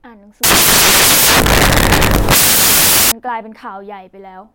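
From 0.44 s to 3.12 s the speech turns into loud, harsh broadband noise: samples built from the wrong bytes. The reader assembles each sample with misordered or misaligned bytes, so the rapidly changing low bits become the dominant part of each value.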